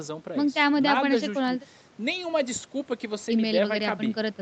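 Nothing stood out on listening to this speech, which carries the usual call microphone processing with its bass trimmed and nothing above 8 kHz.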